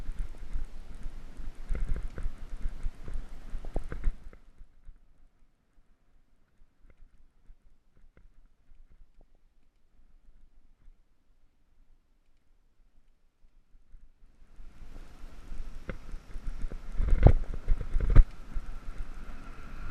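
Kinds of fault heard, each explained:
DAB burbling: bit errors from weak reception slip past error correction into the MP2 audio stream, so corrupted samples put short noise blips into single sub-bands and corrupted scale factors make individual sub-bands jump in level for up to a frame. Here it appears as short bursts at 0.35 s, 3.65 to 3.77 s, 9.21 to 9.35 s, 14.95 s and 17.27 to 17.46 s. Each burst fits a run of several damaged frames and an error rate of a few tenths of a percent.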